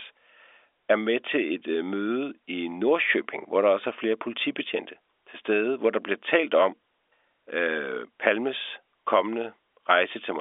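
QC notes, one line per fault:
Speech on a telephone path, its band held to about 300 Hz to 3.6 kHz, which fits G.711 A-law telephone coding at 64 kbps, with no technical fault in the signal.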